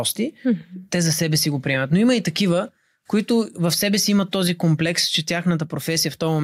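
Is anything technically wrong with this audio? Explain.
Yes, there is gain pumping throughout the speech: the gain swings by roughly 5 dB, pulled down under loud syllables, likely from excessive gain hitting a fast limiter.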